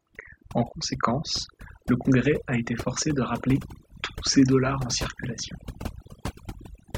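From start to finish, the speech carries overdone noise removal: the denoiser was set so hard that any frequency band sitting near its noise estimate got pushed down or cut, taking quiet parts of the voice with it. The background drops and breaks up into twinkly specks.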